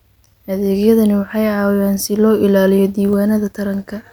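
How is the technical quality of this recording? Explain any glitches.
Two brief clicks interrupt the speech, at 0.66 s and 2.68 s. Each is a single sharp tick with no gap in the sound. The likely cause is dropped samples: a tiny fraction of a millisecond of the stream goes missing, so the waveform jumps straight from one value to a later one. That step discontinuity is far too short to remove anything audible, but it shows up as a thin vertical line across the spectrum.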